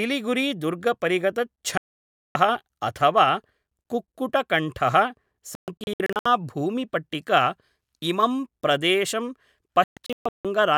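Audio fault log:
1.78–2.36 s, digital broadcast dropout: the speech cuts to silence for about 0.58 s, the receiver muting on bad frames, so whatever was said there is gone.
5.55–6.26 s, digital broadcast dropout: several short holes scattered over about 0.7 s, none longer than 0.13 s, as the decoder keeps losing and regaining good frames.
9.84–10.45 s, digital broadcast dropout: right after "इमं प्रदेशं" the sound breaks into gaps spread over about 0.74 s, the longest 0.16 s, with chunks of the signal missing.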